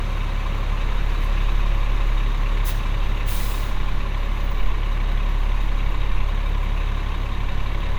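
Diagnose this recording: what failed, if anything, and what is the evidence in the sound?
No audible faults detected.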